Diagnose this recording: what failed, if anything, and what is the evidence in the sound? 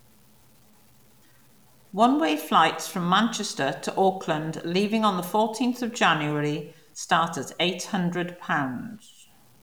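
Low bit depth without dither throughout: gritty, signal-following grain sits about 35 dB below the speech, likely from truncation to roughly 9 bits at sample-format conversion.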